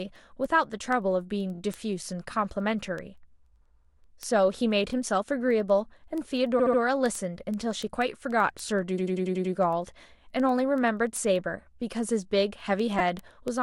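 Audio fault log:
0.16 to 13.58 s: word clock ticks. The receiving device runs on its own clock, off by a couple of hundred parts per million from the sender. The two clocks slip past each other about ten times a second, each time dropping or repeating one sample. That gives a steady train of sharp ticks of uneven strength, around 150 in all, under the speech.
1.54 to 1.59 s, 4.89 to 4.91 s, 6.58 to 6.79 s, 8.97 to 9.53 s and 12.99 s: repeated frames. A short block of compressed audio plays again. The blocks are 23.2 ms played twice more, 16.0 ms once more, 59.5 ms three more times, 82.7 ms six more times, and 2.9 ms five more times. Each repeat stutters. The longest one, near 9 s, adds 557 ms of stuttering.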